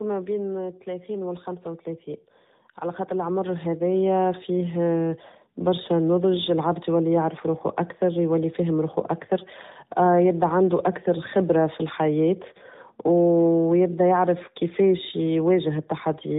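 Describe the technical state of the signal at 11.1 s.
At 11.1 s, as throughout the clip, the speech has passed through tandem speech coding. It was decoded and re-encoded twice by a narrowband mobile codec, which points to AMR-NB around 10 and 12 kbit/s. The second coder compounds the first one's errors, leaving rough, warbly, muffled speech with nothing above 3.8 kHz.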